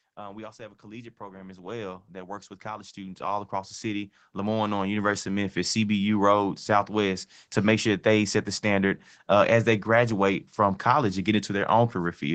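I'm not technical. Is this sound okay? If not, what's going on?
No. From 0.56 to 5.83 s there is automatic gain rising: the speech and the background swell together slowly, unlike someone leaning closer, where only the voice grows.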